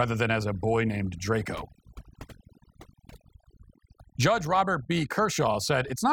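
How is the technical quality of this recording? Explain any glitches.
The recording has one fault, overdone noise removal, present for the whole clip. A noise reduction process applied too strongly cuts individual frequency bands far down or off whenever they sit close to its noise estimate, taking low-level parts of the speech with them. The background is pulled down and breaks into twinkling, warbling specks. A simple noise gate mutes everything at once, but here the gaps flicker band by band across frequency.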